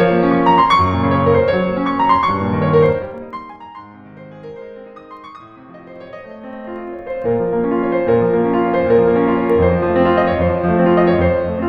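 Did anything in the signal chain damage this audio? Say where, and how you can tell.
Yes. Zipper noise from gain automation at the driver or buffer stage: the music drops by roughly 25 dB from 2.83 to 3.61 s and comes back up from 5.9 to 7.31 s, ticking all the way. Each tick is an unsmoothed 2 dB step, about 15 and 10 a second.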